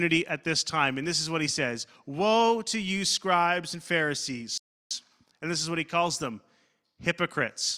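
At 4.58 s the speech halts in a rebuffering stall: playback ran out of downloaded audio and waited 0.33 s for more, then resumed exactly where it stopped, with nothing lost. The waveform and spectrogram show a clean, empty gap until 4.91 s.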